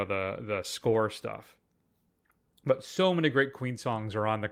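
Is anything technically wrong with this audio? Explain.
No, no technical faults heard.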